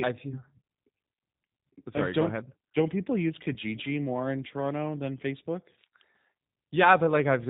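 From start to finish the speech carries G.729 codec damage. The sound points to an 8 kbit/s G.729A stream. This codec rebuilds the voice from a tract filter, a pitch predictor and a few pulses. Nothing above 4 kHz survives. The result is plainly rough and synthetic.

From 3.54 to 3.57 s there is VoIP packet loss concealed by the speech codec. About 20 ms of audio goes missing, which fits a single lost packet. The decoder stretches its last frame into a brief buzzy tone or coloured noise that fades. The voice then stays weakened briefly while it recovers.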